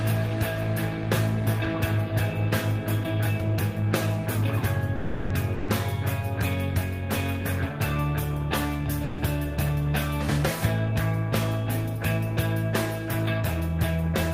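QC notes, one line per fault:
4.95–5.32 s, call audio freeze: the sound stalls into a held, fading continuation for about 350 ms, then resumes exactly where it stopped with nothing skipped. This is likely a delivery hold-up that emptied the jitter buffer, leaving 350 ms of added delay.
5.54–5.70 s and 9.04–9.20 s, burst of packet loss: each time the last sound is stretched and dies away for about 140 ms, then the audio jumps ahead with that 140 ms gone, because a run of packets was lost or arrived too late to play.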